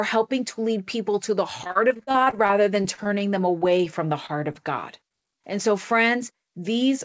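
Right after "lead people to the", from 1.64 to 3.07 s, the speech breaks up into repeated packet loss with a robotic sound. Fourteen gaps, the longest 38 ms, were each patched by stretching the last sound, so about a quarter of the stretch is concealment. It sounds choppy, with pieces missing. On a spectrogram, harmonics freeze into flat, smeared bands at each hole. The waveform shows repeated, too-regular cycles instead of natural variation.

Short concealed packet loss follows four times: 3.58 to 3.73 s just before "from the" (40 ms missing, with the patch adding a little extra time), 4.26 to 4.31 s just after "from the", then 4.53 to 4.56 s and 5.08 to 5.12 s, each about 20 ms missing. Each is a brief smear or wobble where the decoder extended the previous sound. Each shows as a short, blurred patch in the spectrogram and a small stretch of copied cycles in the waveform. Throughout the clip, nothing appears above 8 kHz, which fits a G.722 call path at 64 kbps.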